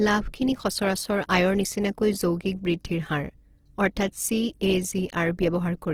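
From start to finish the speech carries plainly audible Opus compression damage, likely from encoding in the codec's music (CELT) mode at a low rate, which fits a bitrate around 16 kbps. With so few bits, the encoder preserves each band's energy but fills the detail with folded or noise-like content, so tonal parts of the speech turn rough, grainy and hissy rather than swirling. Bandwidth stays full, with nothing above 20.4 kHz.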